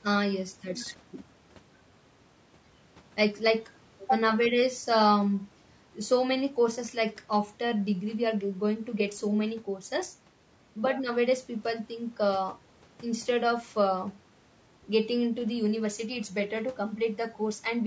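Throughout the speech, the voice sounds rough and grainy. Noise fills the gaps between pitch harmonics, and the damage is plainly audible. The likely cause is low-delay AAC compression (AAC-ELD). Its short frames resolve harmonics poorly, and the grain fits a bitrate near 32 kbps.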